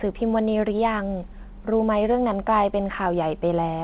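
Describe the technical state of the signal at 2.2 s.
At 2.2 s the speech is intact, with no dropout, glitch or distortion, only the narrowband character of the G.711 call path, which leaves nothing above 4 kHz.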